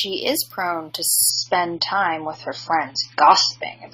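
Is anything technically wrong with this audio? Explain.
Yes. At 1.30 s, just after "is prone to", the speech drops to an adaptive stream at a lower bitrate until the end. The player switched to a far leaner AAC version, roughly 96 down to 16 kbit/s. Nothing sounds above 7 kHz, so it turns dull and smeared, with no gap.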